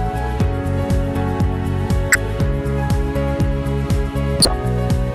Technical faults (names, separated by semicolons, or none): corrupt frame decoded